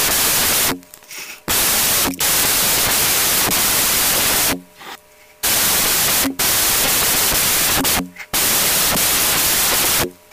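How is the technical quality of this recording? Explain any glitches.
Pretty rough, honestly. There's one problem, and it runs the whole way through.

The whole clip has a wrong sample width problem. It was written as 16-bit integers but read back as packed 24-bit ones, so every three bytes get lumped into one sample. Those samples straddle the original ones, and only some happen to keep the real signal's top bits. The result is loud noise with the speech buried underneath, running 1.5 times too fast and pitched up by the same ratio.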